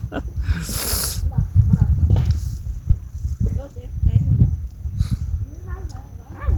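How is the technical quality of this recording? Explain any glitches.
The recording has two timing glitches close together. Both change the timing of playback.

At 2.89 s there is a skip ahead. Roughly a third of a second of audio never plays. It was dropped while later audio was already waiting, either lost in transit or discarded when the buffer overflowed. Nothing fills the gap. The sound before the cut joins almost directly onto the sound after it, so playback seems to lurch forward.

From 2.98 s to 4.18 s there is a jitter buffer speed-up. The buffer was still holding more audio than it aims for, as happens when delayed packets arrive in a bunch. To cut that delay, the receiver removed many short slices, each one or a few pitch periods long, one after another. About a tenth of a second was trimmed in total. The sound runs at 108% speed with unchanged pitch, so this stretch feels slightly rushed.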